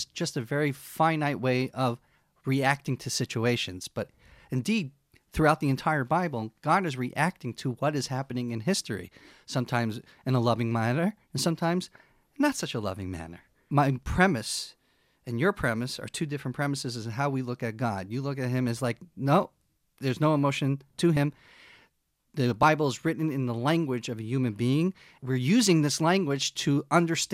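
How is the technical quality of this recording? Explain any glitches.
The recording has one glitch, a case of compressed frames skipped at 22.63 s, just before "is written in the". Roughly one compressed frame, around 30 ms of audio, never plays, so the speech jumps ahead slightly. The join between the frames either side of the gap makes a brief glitch. A spectrogram shows a small discontinuity at the join.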